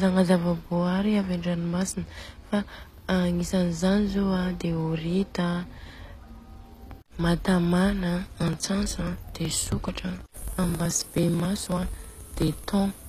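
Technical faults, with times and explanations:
Throughout: HE-AAC compression, plainly audible, is the likely cause of the treble damage. The upper band is rebuilt from copied lower bands, so harmonics misalign and sibilants turn gritty. A spectrogram shows a hard ceiling at 14.9 kHz, consistent with roughly 24 kbps.
8.26 to 13.02 s: periodic USB or driver dropouts. Roughly 10 ms of audio is skipped every 0.054 s, around a hundred times, giving a regular ticking while sound is present. The waveform shows evenly spaced splices, and the spectrogram shows thin vertical streaks 54 ms apart.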